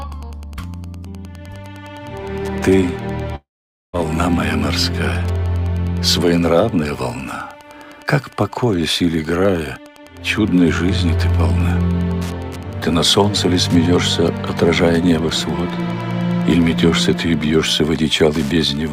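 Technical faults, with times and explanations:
throughout, Wi-Fi interference: A steady tick repeats every 102.4 ms, about ten times a second. A nearby Wi-Fi radio's beacon and data bursts are rectified by the audio circuit. The ticking sits roughly 30 dB below the sound.
3.35–3.95 s, long network dropout: The sound turns into a brief buzz or hiss that fades. Then there is almost half a second of silence. Audio resumes further on, with about 0.58 s lost. This was likely a stretch of audio that never arrived, with the receiver briefly stretching the last sound.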